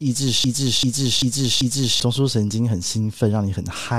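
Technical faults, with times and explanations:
0.44–2.00 s, broken-record loop: a 390 ms speech fragment plays four times in a row, likely a stalled player resending its last piece, so the intended audio is lost.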